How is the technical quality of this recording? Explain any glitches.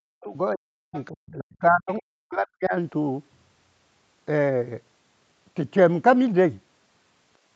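The recording has two related call-processing faults in its first three seconds. Both point to an echo canceller struggling while the far side played through the loudspeaker. The speech is band-limited to 8 kHz by the call path.

Speech suppressed in double talk occurs from 0.00 to 0.36 s and from 0.52 to 2.74 s, with about 2.3 s affected in total. The speech dips by as much as about 40 dB. This is likely because the canceller could not separate the local talker from the loudspeaker echo and turned both down. Unlike a network dropout, the cuts follow overlapping talk rather than packet timing.

The other side's voice leaks through at 0.94–1.03 s, 1.50–1.57 s and 1.91–1.96 s. These are short scraps of a second voice well below the main speech: about 20 dB down at first, then roughly 35 and 30 dB down. They likely come from loudspeaker sound the canceller failed to remove. They are distinct from room reverberation because a different voice is heard.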